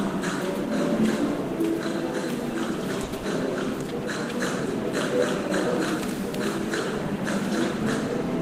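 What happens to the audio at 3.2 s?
Right around there you get two network faults back to back. First, from 3.04 to 3.15 s, there's a short stall from a late packet: the jitter buffer ran dry, so the receiver held the last bit of sound for about 90 ms until the packet turned up, then carried on where it left off. Nothing is lost, but that sound drags a little, with a faint buzz or dip, and everything after it lands 90 ms later.

Then, from 3.17 to 3.26 s, there's a burst of packet loss. A run of packets never arrived in time, so the receiver stretched the last sound for about 70 ms and let it fade out. When playback resumes, about 80 ms of the original audio has been skipped.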